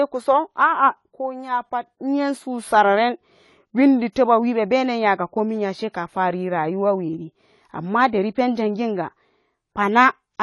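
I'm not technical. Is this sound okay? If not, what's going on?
No. Throughout the speech, from the first second to the last, nothing is heard above about 11.5 kHz, so it sounds dull, with different kinds of artefacts heard together. This is likely transcoding between lossy codecs: the recording was squeezed by one compression format, then squeezed again by another, stacking both sets of damage.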